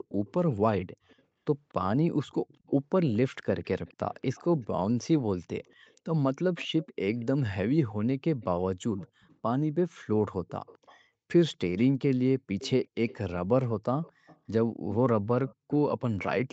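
Speech with an echo leak: a faint delayed copy of the speech trails it by a steady 236 ms from 0.09 to 4.67 s, 5.66 to 7.25 s, 8.41 to 9.37 s, and 10.48 to 16.52 s. It grows from roughly 30 dB below the speech to roughly 20 dB below by the end. The likely cause is a far-end loudspeaker whose echo canceller let some of its microphone pickup back into the call. Unlike room reverberation, it is a distinct repeat at a fixed lag rather than a smooth decaying tail.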